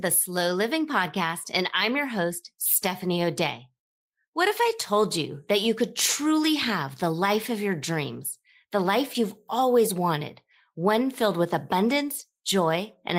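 A lost packet rebuilt from error correction at 11.51 s, just after "wanted one filled with": the next packet's low-bitrate copy filled this 20 ms gap, leaving a brief rougher, noisier patch.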